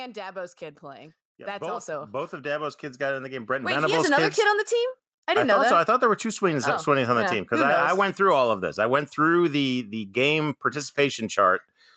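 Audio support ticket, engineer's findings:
Automatic gain rising, 0.14 to 4.27 s: level climbs steadily by about 15 dB until just before "kids kid on the". Probable component: call AGC reading the input as too quiet and ramping gain up. Background noise swells with the speech, which rules out a talker moving closer to the mic. Content stays capped near 8 kHz, consistent with the wideband call codec path.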